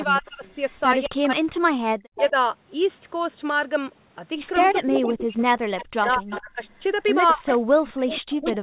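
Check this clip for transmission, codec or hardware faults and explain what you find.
Two call faults recur through the clip. Both point to a speakerphone on one side of the call. The band stops near 4 kHz, which fits a G.711 mu-law path.

Speech suppressed in double talk occurs from 0.04 to 0.44 s, 1.07 to 2.34 s, 4.66 to 6.62 s, and from 7.34 s to the end. The speech dips or breaks up, by about 30 dB at first and later about 40 dB. The likely cause is an echo canceller that cannot separate the talker from returning echo, so it ducks both.

Echo leak appears from 0.25 to 1.36 s, 2.16 to 2.31 s, and from 4.6 s to the end. A copy of the speech trails by 209 ms. It is faint at first, about 30 dB down. Later it sits only about 10 dB below the speech. The canceller likely left part of the loudspeaker pickup in its microphone signal.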